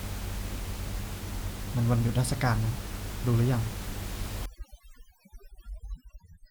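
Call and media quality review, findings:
Overdone noise removal, 4.46–6.51 s: room noise (about 12 dB below speech) drops to twinkling specks. Over-strong suppressor gating bands, not codec loss.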